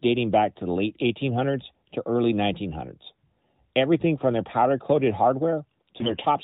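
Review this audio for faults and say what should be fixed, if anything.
Right at the tail, from 5.98 to 6.25 s, the speech goes hoarse and gargly while keeping roughly its pitch and level. That's AMR bit errors. The less protected bits in the frames arrived flipped, around one in ten by the sound of it, over a stretch that fits about thirteen 20 ms frames. The checksum on the important bits still passed, so the decoder played them, with excitation pulses landing in the wrong places and fine gain, pitch and spectral values off. It's all inside the narrowband mobile band, nothing above 4 kHz, which fits AMR-NB's 12.2 kbps mode. To prevent it, fix the weak radio link, or have the receiver conceal frames with errors instead of decoding them.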